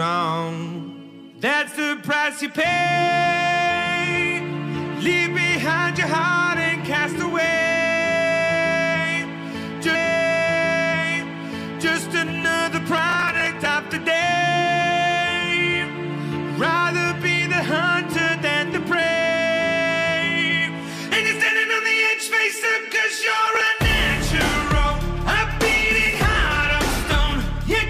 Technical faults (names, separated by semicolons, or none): processor overload crackle